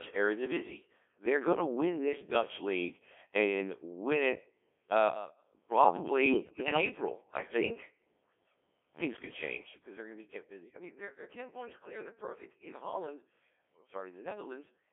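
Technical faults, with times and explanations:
Throughout, Codec 2 vocoder: The speech passes through Codec 2 at 1.3 kbit/s, which sends only pitch, voicing, energy and a spectral envelope per frame and then rebuilds the voice from sine waves at the decoder. The original waveform is gone, so the speech comes out robotic and buzzy with heavy damage. The line band runs from 250 Hz to 3.5 kHz, leaving it thin in the lows and dull at the top.
6.28 to 6.81 s, bit errors on digital voice radio: For about half a second, corrupted bits reach the low-rate decoder at a rate of around one in ten. Each bit steers the pitch, level, voicing or spectrum of a whole frame, so the damaged stretch, which fits about a dozen vocoder frames, jumps in pitch, loudness and tone colour. The speech breaks into bleeps, warbles and robotic gibberish before clearing.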